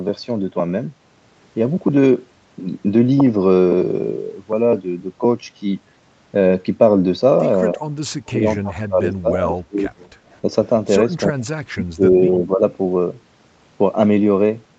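From 7.75 to 9.86 s the speech is pulled down in pieces, by up to about 30 dB. It is likely speech suppressed in double talk, where the echo canceller mistook overlapping far-end sound for echo and attenuated the near talker. Shallower dips follow at 10.42–10.48 s, then deeper ones at 11.24–11.57 and 11.73–12.63 s.

Short echo leak bursts sit at 9.98–10.1, 10.32–10.37 and 12.7–12.75 s. They are faint copies of the speech arriving 280 ms late, some 30 dB below it. That points to residual loudspeaker echo that the canceller did not fully remove.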